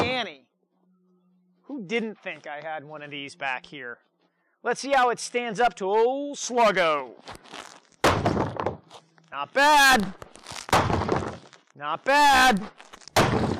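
At 9.34 s the audio jumps forward with no gap. About 3 ms of sound is missing, and the two sides meet directly. This is likely a dropped buffer (overrun). The program collected its samples too late, and the hardware overwrote them first.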